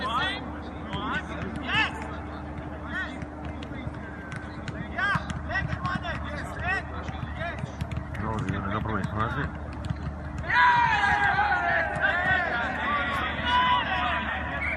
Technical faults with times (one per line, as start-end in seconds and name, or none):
0.00-14.77 MP2 compression
11.90-11.98 DAB burbling